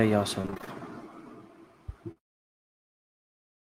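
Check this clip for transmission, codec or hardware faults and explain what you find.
Two transmission faults are present, both from packets failing to reach the decoder in time.

From 0.41 to 0.80 s there is repeated packet loss, giving a robotic sound. Audio went missing again and again across this stretch, about 140 ms in all, with the longest hole around 26 ms. Each time, the receiver patched the hole by extending the preceding sound, so nearly half the span is reconstructed rather than real. The speech turns choppy and mechanical, with fragments dropping out between artificial continuations.

From 2.11 to 2.18 s there is a short concealed packet loss. Roughly 40 ms of the stream never arrived in time. The decoder bridged it by carrying the last sound forward, following its pitch if voiced or using shaped noise if not, and then crossfaded back into the genuine signal. What reaches the ear is a brief smear or wobble in the speech at that point rather than a clean gap.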